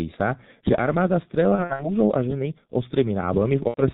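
Throughout, the speech is carried by a G.723.1 codec, and the damage is heavy. Nothing above 4 kHz survives. Its slow 30 ms frame model leaves the voice muffled and hoarse, with smeared consonants. The sound fits the low 6.3 kbit/s mode.

From 1.55 to 1.88 s, after "sa že armáda" and before "a ženy", VoIP packet loss is concealed by the speech codec. About 150 ms is lost in gaps of up to 60 ms. The decoder extends its last pitch, so the voice is stretched into a buzzy tone or coloured noise that fades. At 3.68 to 3.82 s, a 90 ms loss repeats this.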